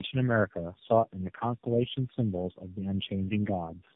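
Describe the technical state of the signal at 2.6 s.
Tandem speech coding is present at 2.6 s and across the whole clip. The speech sounds like it passed through four low-rate speech coders in a row, each re-coding the previous one's degraded output. The result is rough, muffled and warbly, with nothing above 3.7 kHz.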